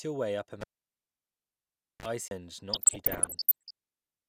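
Cable pulled and plugged in, from 0.61 to 2.06 s, right after "your way up a": the live lead comes out with a pop and the speech drops to near silence for about 1.4 s. A 34 ms burst of 50 Hz mains buzz follows as the plug tip touches first, then a second pop as the sound returns.

CD skip, at 2.28 to 2.31 s: the player loses its place on the spiral track, perhaps after a knock or a disc flaw, mutes very briefly, then carries on from another spot. It is heard as a tick followed by an abrupt jump in the speech.

DAB burbling, from 2.73 to 3.71 s: weak reception lets bit errors slip past error correction into the MP2 stream, so corrupted samples put short blips of noise in individual sub-bands and corrupted scale factors make sub-bands leap in level for up to a frame. The result is a muddy, bubbling layer of chirps and squelches over the speech, consistent with dozens of damaged frames and an error rate near one percent.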